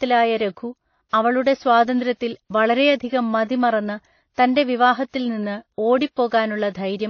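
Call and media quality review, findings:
Likely transcoding between lossy codecs, a low-rate AAC stage into WMA: nothing above 6.6 kHz, artefacts from both codecs heard together throughout the speech, fits roughly 24 kbit/s then 64 kbit/s.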